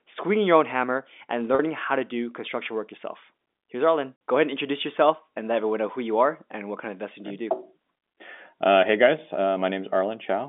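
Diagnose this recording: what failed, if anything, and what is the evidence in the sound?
Packet loss with pitch repetition at the network stage, 1.55 to 1.59 s. About 40 ms of speech is lost. The receiver repeats the last pitch period to fill it, so the speech briefly holds with a buzz. This fits four 10 ms packets.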